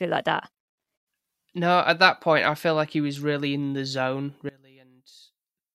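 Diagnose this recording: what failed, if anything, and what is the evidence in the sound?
From 4.49 s to the end at 5.75 s, the speech collapses to a faint residue, dropping by about 22 dB. This is what one channel inverted sounds like when summed to mono: the centred speech common to both channels cancels, leaving only their small differences. The sudden onset mid-clip likely points to a polarity flip in one channel's analogue wiring or a patch point being switched.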